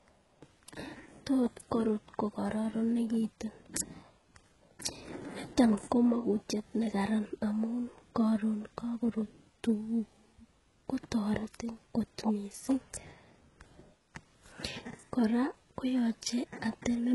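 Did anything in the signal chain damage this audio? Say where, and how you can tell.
Yes: HE-AAC compression, throughout, at the codec stage. The treble over this speech sounds rebuilt by band replication, gritty and lispy on s sounds, and stops near 11.5 kHz. The heavy damage fits a very low bitrate, likely around 12 kbps.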